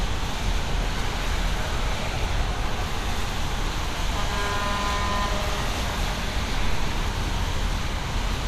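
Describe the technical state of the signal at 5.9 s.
MP2 compression at 5.9 s, present throughout the clip: the sound is dull, with nothing above 14.4 kHz and a plainly audible gurgling, granular roughness. The likely cause is MPEG Layer II coding at a rate that fits about 80 kbps, starving its sub-bands of bits so the upper ones drop out and the rest are coarsely quantised.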